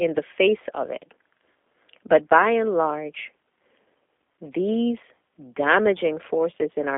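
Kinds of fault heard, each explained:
G.729 codec: The speech runs through the G.729 codec throughout. This low-rate voice coder does not send the waveform. It sends a vocal tract filter, a pitch predictor and a few pulses per short frame, and the receiver rebuilds the speech from these. The damage is plainly audible. The speech sounds rough and synthetic, which fits 8 kbit/s. The band is a narrow telephone line, from about 250 Hz to 3.5 kHz, with nothing above 3.6 kHz.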